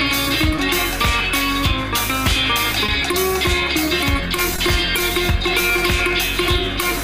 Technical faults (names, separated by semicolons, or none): short concealed packet loss